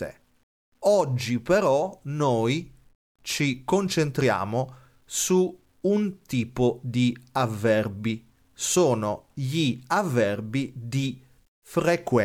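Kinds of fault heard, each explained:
Low bit depth without dither: The speech carries a grainy, rough distortion from start to finish. It tracks the sound itself, thickening as the speech gets quieter. Soft endings turn gritty and sputter instead of fading cleanly. The error sits only about 50 dB below the signal. That fits roughly 10 bits. The likely cause is samples truncated to a coarse step with no dither, so the rounding error follows the signal.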